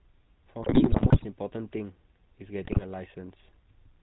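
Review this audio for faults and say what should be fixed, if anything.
The speech went through the GSM full-rate codec throughout: the vocal tract is modelled and driven by a coarse, sparsely sampled pulse excitation, with everything above 4 kHz discarded. The result is a plainly audible buzzy, gravelly roughness, consistent with a 13 kbps full-rate encoding. To prevent it, record or transmit over a wideband or modern codec instead of the GSM full-rate path.

GSM bit errors occur from 0.62 to 1.25 s and from 2.64 to 2.83 s. Corrupted bits reached the decoder and scrambled filter, pitch and gain values frame by frame, so the sound breaks into squawks, pops and gargling. The first burst fits an error rate of about 6 percent, the second about 4 percent. To prevent it, improve link quality or add stronger error protection and bad-frame concealment.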